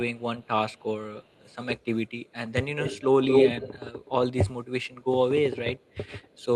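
There's an echo leak here: a faint delayed copy of the speech, roughly 30 to 35 dB down, trails it by 308 ms at 0.16–0.85 s and 1.2–2.33 s. The delay then shifts to 225 ms: at 2.79–3.69 s the copy comes through about 5 dB louder than the speech itself, then drops back to faint at 4.83–5.04 s and 5.79–6.45 s. It's likely a far-end loudspeaker whose echo canceller let its own pickup slip back into the call.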